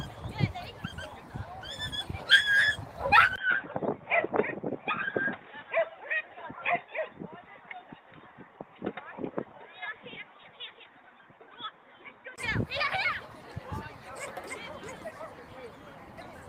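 Input switched to a poorer device, from 3.36 s to 12.38 s: at 3.36 s a brief gap of about 20 ms opens, and the sound turns dull and boxy, with nothing above 3.8 kHz, a level drop of roughly 5 dB and a faint new noise floor sitting well beneath the signal. This is likely a mid-recording change to a narrower-band input, such as a headset's call profile. At 12.38 s the full bandwidth and original level return.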